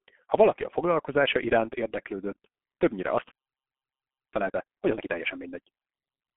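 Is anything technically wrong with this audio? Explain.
Yes, there are two faults.

For the whole clip the speech sounds muffled, hoarse and boxy, with consonants smeared together. This is the G.723.1 codec at heavy damage. The band sits roughly between 150 Hz and 3.4 kHz, with nothing above 3.8 kHz, and the coarseness fits a rate near 6.3 kbit/s. The codec models the voice in long 30 ms frames that update slowly, so quick consonant detail is lost and the voice takes on a rough, buzzy texture.

From 4.33 s to 6.25 s the speech is rushed along at about 1.5 times normal speed, but the pitch stays the same. This is time-compressed catch-up. After a stall, the player cuts short slices out of its backlog and cross-fades the remaining pieces together. The audio keeps its pitch while playing faster.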